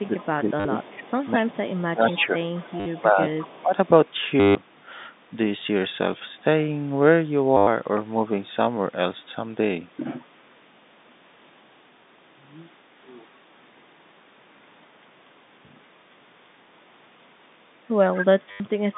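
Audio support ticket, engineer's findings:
Echo leak: delayed repeat of the speech trailing the talker by about 0.21 s, at 0.0–0.23 s (about 25 dB down), 1.23–3.62 s (about 20 dB down) and 18.15–18.25 s (louder, only about 10 dB down). Likely far-end echo canceller letting loudspeaker pickup through and returning it.

Speech suppressed in double talk: talker's level sags and thins. 0.02–2.44 s, dips up to roughly 20 dB across about 2 s; 2.99–3.2 s, roughly 10 dB; 3.62–3.75 s, roughly 15 dB. Likely echo canceller attenuating everything when it cannot separate near talker from echo.

Packet loss with last packet repeated: short robotic stutters with a buzz near 100 Hz, at 0.6 s (50 ms), 2.8 s (60 ms), 4.4 s (150 ms), 7.57 s (100 ms), 18.51 s (90 ms). Receiver replays the last packet across gaps; buzz rate fits 10 ms packets.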